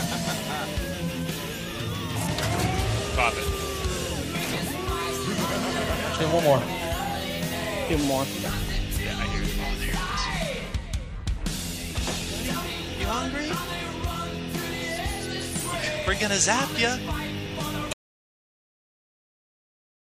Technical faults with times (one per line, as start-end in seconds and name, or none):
17.93-20.00 audio dropout to silence